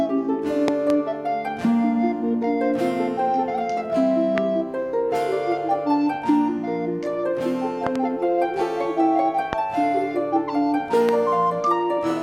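Sharp loud pops jump well above the sound, which carries on beneath them: a double pop at 0.68–0.92 s, one at 4.38 s, another pair at 7.87–7.98 s, and single ones at 9.53 and 11.09 s. They are likely voltage spikes from a switch, plug, static or driver glitch.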